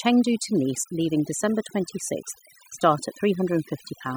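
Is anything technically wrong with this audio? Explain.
Yes, the whole clip shows overdone noise removal. Someone ran a noise reducer far too hard on a noisy speech recording, so any frequency band that sat close to the tool's idea of the noise got pushed way down or cut out entirely, and the softer parts of the voice went with it. What's left is a background that has dropped away and broken up into little twinkly specks.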